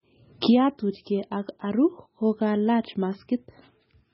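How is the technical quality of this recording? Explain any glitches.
Technical quality is poor throughout, with heavy damage from what is likely MP3 compression at a very low bitrate, roughly 16 kbps. Starved of bits, the encoder discards everything above 5.6 kHz and drops weak frequency lines frame by frame, so the speech sounds dull, watery and swirly, with smeared attacks.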